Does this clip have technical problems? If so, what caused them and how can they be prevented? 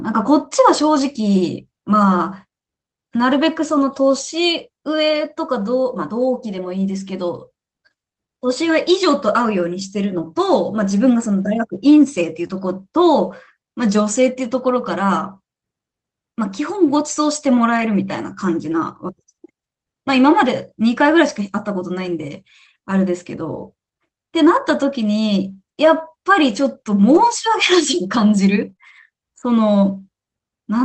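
Yes. The speech passed through an Opus call path whose coding noise and upper limit near 8 kHz fit a 24 kbps wideband setting, and two kinds of packet loss show up.

Lost packets rebuilt from error correction occur at 3.81–3.83, 10.17–10.23, 12.49–12.51, 17.77–17.83, 18.71–18.73, 27.15–27.17 and 28.69–28.71 s, each 20 or 40 ms. The next packet's low-bitrate copy filled each hole, so nothing drops out. The sound just turns briefly rougher and noisier. Unlike concealment, nothing is smeared or guessed. Improving the network path or raising the error-correction redundancy would limit these.

Short concealed packet losses occur at 12.47–12.51 s and in two back-to-back stretches at 28.73–28.77 and 28.77–28.81 s, each about 20 ms missing. Here no backup copy arrived, so the decoder stretched the preceding sound forward and blended back. That gives a brief smear or wobble rather than the grainy texture of the rebuilt frames. 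A larger jitter buffer and a steadier connection would prevent them.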